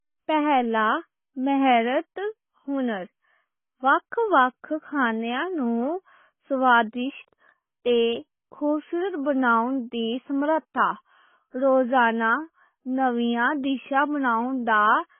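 A speech recording, heavily damaged by AAC compression from start to finish. Nothing remains above about 3.5 kHz, so the voice sounds dull and boxed in. Sibilants lose their edge and turn fizzy. Sustained sounds have a smeared, warbling texture. The likely cause is AAC-LC encoding at a very low bitrate, around 16 kbps. The encoder discarded the upper band and quantised what remained coarsely, leaving holes in the spectrum.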